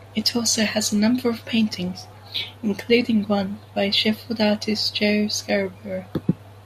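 A short stretch of speech, and nothing technically wrong turns up anywhere in it.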